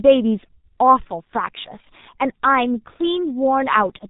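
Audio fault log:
throughout G.723.1 codec: heavy damage leaves the speech muffled and hoarse, with nothing above 3.8 kHz and smeared consonants, which fits a roughly 6 kbit/s coder, unlike plain low-pass filtering.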